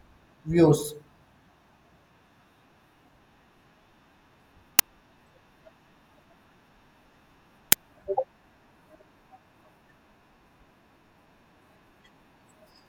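Speech, with two uninitialised buffer bursts at 4.79 s and 7.72 s. Each is a loud crack about 5 ms long, fitting a 256-sample buffer played out before audio filled it. Unlike a dropout's silence, the gap is filled with harsh noise.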